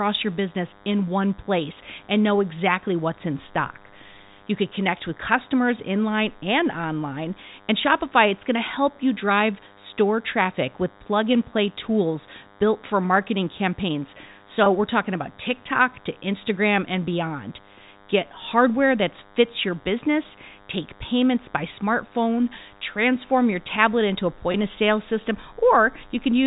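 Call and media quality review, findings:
DECT cordless phone buzz, whole call: thin, steady 100 Hz buzz rich in harmonics, roughly 30 dB under the speech. A constant pitch and bursty edge separate it from smooth mains hum.

Packet loss with pitch repetition, 14.64–14.66 s (after "built for marketing campaigns", before "we're talking about") and 24.52–24.54 s (after "your tablet into a", before "of sale system"): 20 ms held, buzzy note, consistent with one lost packet bridged by a repeated pitch period. It is not a click or dropout.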